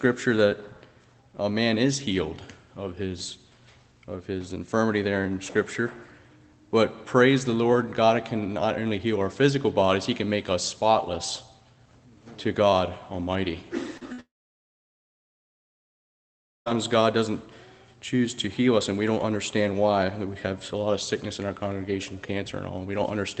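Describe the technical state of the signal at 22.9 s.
At 22.9 s the signal is intact, with nothing beyond the normal character of the call path it passed through.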